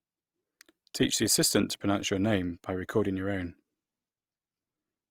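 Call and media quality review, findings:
Speech grainy, rough throughout. Full bandwidth to 20.5 kHz. Likely Opus compression, CELT mode, filling starved bands with folded or noise content. Fits a 24 kbps bitrate.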